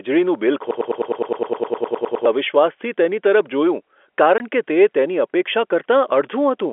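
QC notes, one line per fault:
0.71–2.26 s, broken-record loop: a 103 ms fragment of the speech plays back to back 15 times, each pass identical, giving a stuttering, machine-gun buzz instead of forward progress. The exact repetition points to a stall in which the player, encoder or stream most likely kept resending the last chunk it held. Whatever speech belonged in that 1.5 s stretch never arrives; the recording simply resumes afterwards.
4.38–4.40 s, packet loss filled with silence: a 20 ms hole drops out of the speech with abrupt edges. The length fits a single lost packet at a common 20 ms packet size, with the receiver inserting digital silence rather than concealing the gap. Through the surrounding telephone band of about 300 Hz to 3.4 kHz, the cut is a brief, sharp dropout.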